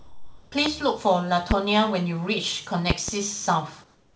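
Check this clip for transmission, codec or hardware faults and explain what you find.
The clip has three kinds of fault: a clipped opening, three bursts of popping, and a synthetic background at the end.

Sound dropped by the voice detector, 0.00 to 0.52 s: the sender's detector likely judged quiet speech to be background, so about 0.32 s of speech is lost under steady comfort noise.

Loud pop, at 0.66 to 0.69 s, 1.51 to 1.54 s, and a double pop from 2.90 to 3.11 s: a sudden voltage step, likely a connector, switch or driver glitch, adds sharp clicks peaking around 20 dB above the speech, which continues underneath.

Comfort noise in place of the background, 3.84 to 4.15 s: the sender likely stopped transmitting during the pause, and the receiver filled it with featureless synthetic noise about 4 dB quieter than the real background, sitting about 38 dB below the loud parts. Over the G.722 call path, nothing is heard above 8 kHz.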